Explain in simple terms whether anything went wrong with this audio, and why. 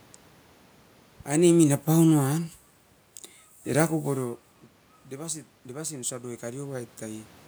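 Two things went wrong with the recording level. From 1.29 to 2.64 seconds there is automatic gain falling. The recorder decided the sound was too loud and turned itself down step by step. The voice and the room noise behind it sink together, around the time the talker shifts position at about 1.5 seconds.

From 5.11 to 7.35 seconds there is automatic gain rising. The incoming sound had become much quieter, so the recorder slowly turned itself back up. You hear the voice and the background room noise swell together over about two seconds, rather than the voice alone getting louder.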